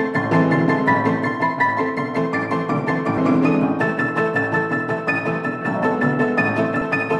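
Short jumps where the sound lurches forward at 3.17 to 3.20 s, 5.61 s and 6.81 s are compressed frames skipped. Runs of frames, apparently 20 ms each, were never decoded, dropping roughly a sixth to a fifth of a second each time.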